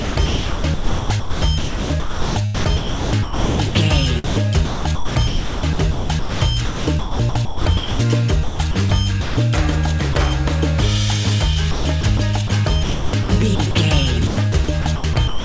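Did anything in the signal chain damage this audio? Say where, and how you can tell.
Yes. Sound chopped by the voice detector, at the call-processing stage, runs from 0 to 9.37 s (about 5.3 s replaced), 11.71 to 13.75 s (0.64 s) and 14.27 s to the end (0.47 s). The sender's detector likely toggled, swapping real sound for comfort noise. A spectrogram shows abrupt blocks of smooth, featureless noise interrupting detailed content, with everything cut off above 8 kHz by the call codec.

Sound dropped by the voice detector hits once, at 10.13 s, where a 20 ms sliver of sound vanishes under comfort noise, likely because the detector briefly judged it background. The waveform shows a tiny flat-textured notch, and the spectrogram shows a thin vertical seam of uniform noise.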